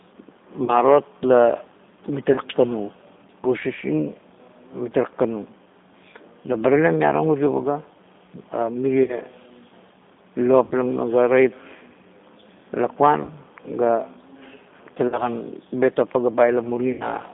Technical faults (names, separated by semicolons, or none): G.729 codec; VoIP packet loss concealed by the speech codec